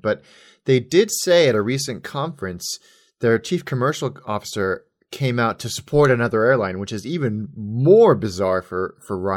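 Nothing technically wrong turns up anywhere in this speech recording, so there are no times or causes to point to.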